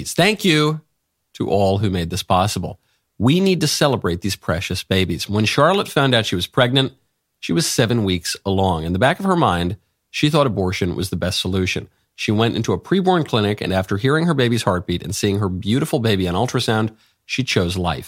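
Nothing technically wrong turns up in this speech recording; it's a straightforward listen with no faults to point to anywhere along the way.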